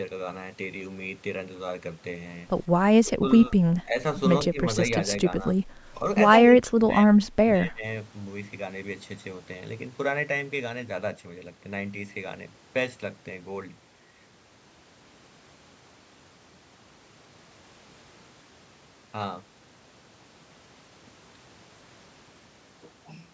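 The speech dips and breaks up in pieces at 3.03–3.25 s, 3.48–3.57 s, 3.83–3.96 s, 4.47–4.62 s, 6.52–7.34 s and 7.57–7.84 s. It falls by about 10 to 20 dB in the short dips and by about 30 dB in the longest stretch, near 6.5 to 7.3 s. This is likely speech suppressed in double talk: with both sides talking at once, the echo canceller could not tell this talker from its loudspeaker echo and turned both down.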